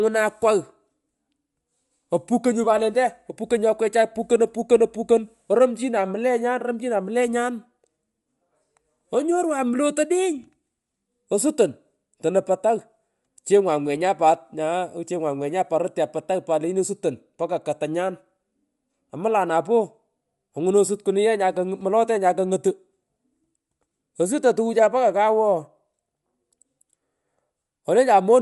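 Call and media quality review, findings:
Bluetooth LC3 compression throughout: grainy, breathy top, nothing above 11.5 kHz. Likely LC3 noise-filling, fitting 48 kbps, 10 ms frames. Grainy, unlike plain low-pass dullness.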